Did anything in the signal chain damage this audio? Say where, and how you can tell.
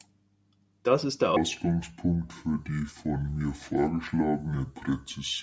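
Yes, at playback: from 1.37 s, right after "ist der", to the end, the speech drops to two-thirds speed and about 7 semitones lower. That is a wrong sample rate: samples played slower than recorded without conversion, which fits 24 kHz audio clocked out at 16 kHz.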